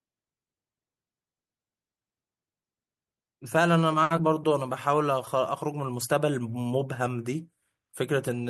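Speech carried over a WebRTC call path, with the Opus coding limiting the band to about 12 kHz and a sound quality that fits roughly 48 kbps, has three faults bunched around the 4 s mark. The first is a short stall from a late packet, from 4.03 to 4.12 s. A packet had not arrived when it was due, so the jitter buffer ran dry and the receiver held the last sound for about 70 ms until the data turned up. Playback then resumed where it left off, so nothing is lost, but the delay grows by 70 ms and the held sound stretches unnaturally with a faint buzz or dip. Immediately after, at 4.16 to 4.19 s, comes a short concealed packet loss. About 40 ms of audio never reached the decoder in time. The receiver patched only about 10 ms of that by extrapolating from the preceding signal, then cut the delay back a little, so a fragment of sound is skipped and the joint comes through as a quick smear or wobble. 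From 4.28 to 4.54 s there is a jitter buffer slow-down. With its reserve low, the buffer rebuilt about 39 ms of margin by repeating individual pitch periods, so the speech plays at about 88% speed at unchanged pitch, sounding drawn out.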